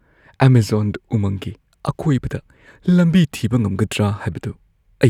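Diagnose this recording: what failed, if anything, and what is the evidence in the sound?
No audible faults detected.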